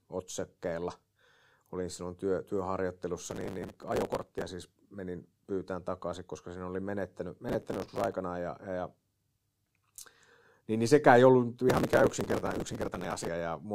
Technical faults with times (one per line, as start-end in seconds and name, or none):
3.22-4.43 processor overload crackle
7.49-8.13 processor overload crackle
11.69-13.28 processor overload crackle